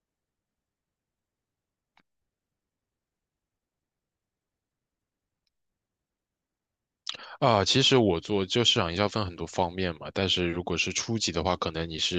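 A speech recording with no technical fault to be heard. Nothing in the audio calls for a time or a cause.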